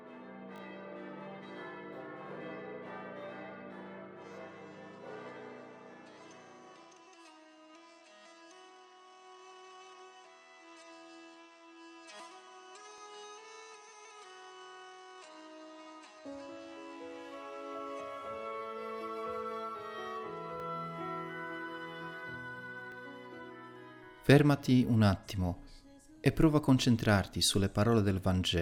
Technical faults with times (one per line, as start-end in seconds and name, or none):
0.56-0.60 repeated buffer
12.98 repeated buffer
20.60 repeated buffer
22.92 repeated buffer